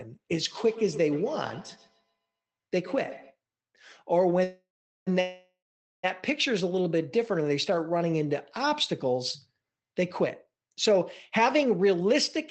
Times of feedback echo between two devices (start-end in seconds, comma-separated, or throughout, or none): 0.52-3.36